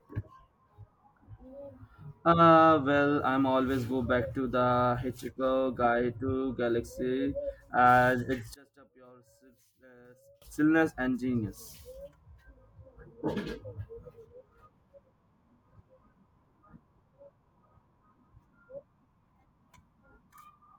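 From 8.54 to 10.42 s the speech drops by about 28 dB and turns ghostly, nearly gone. That's likely one channel inverted: with one side's polarity flipped, the centred voice cancels itself when the stereo folds down to mono.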